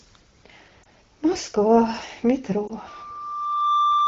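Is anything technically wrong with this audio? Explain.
Yes, there are two kinds of fault.

Lost AMR speech frames occur at 0.83 to 0.86 s and again at 2.67 to 2.72 s, each about 20 ms, consistent with a single failed frame. The wideband decoder bridged each gap by repeating the previous pitch and vocal tract parameters at reduced gain, so each is heard as a short dip or warble in the speech.

Loudspeaker feedback squeal starts at 2.87 s and runs to the end of the clip. The microphone picks up its own loudspeaker, and at 1.2 kHz the loop gain exceeds unity, so that tone builds over roughly a second into a steady squeal about 5 dB above the speech.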